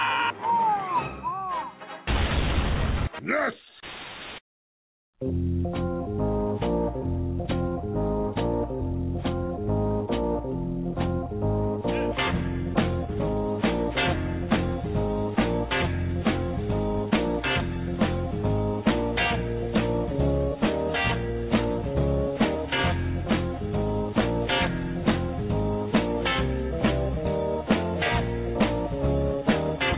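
Nothing goes wrong anywhere here; the audio just carries the narrow, telephone-style band you'd expect from a G.711 mu-law call link, with nothing above 4 kHz.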